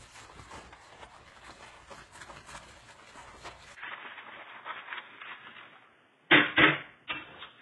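Transcoding between lossy codecs runs through the whole recording. It most likely comes from a very low-rate HE-AAC encode later re-encoded as Vorbis. Both sets of artefacts sit together, and the lowest cut-off in the chain leaves nothing above 11.5 kHz.

An input switch to a poorer device happens at 3.75 s, after a 20 ms gap. The audio turns dull and boxy, with nothing above 3.8 kHz. Its level shifts by around 5 dB, and a new noise floor appears about 35 dB down, likely from another microphone or a headset call profile.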